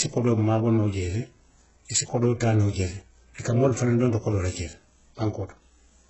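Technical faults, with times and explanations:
Throughout, HE-AAC compression: the speech is band-limited, with nothing above 8 kHz, and heavily damaged; s sounds are gritty and lispy. This is likely spectral band replication at a very low bitrate, near 8 kbps, copying lower bands upward so the treble's harmonics misalign.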